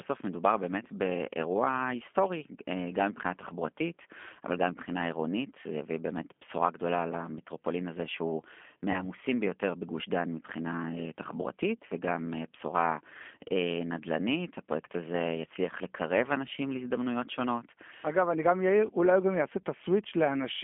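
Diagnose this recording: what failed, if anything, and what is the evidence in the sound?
Codec stage: G.729 coding runs throughout, with plainly rough, synthetic speech from 8 kbit/s pulse-based resynthesis. A spectrogram shows nothing above 3.4 kHz or below 250 Hz.

Network stage: VoIP packet loss concealed by the speech codec at 8.92–9.06 s. About 20 ms went missing, fitting one lost packet. The decoder extrapolated from its last pitch and filter with falling gain, which looks like smeared, decaying harmonics.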